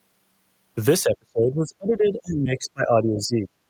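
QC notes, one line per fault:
1.03–3.48 s, speech suppressed in double talk: the echo canceller likely mistook overlapping talk for echo and turned it down, dropping the speech by around 30 dB.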